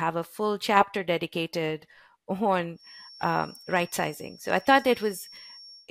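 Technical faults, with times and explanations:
2.72 s to the end: feedback whistle. A thin, steady tone at 5.5 kHz enters behind the speech and holds to the end of the clip, sitting well below the voice at roughly 25 dB down. It is likely a loudspeaker-to-microphone loop held just at the edge of feedback, so one frequency rings on without building. Unlike a runaway howl, it never builds, only swelling and fading slowly in level, and unlike mains hum it is a single high pitch with no low buzz beneath it.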